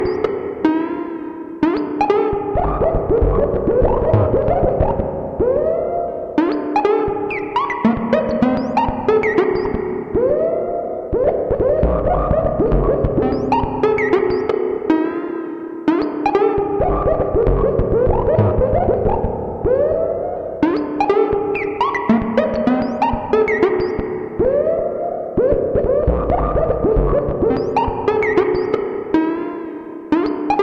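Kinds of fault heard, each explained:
No faults turn up anywhere in this one, so there's nothing to list here.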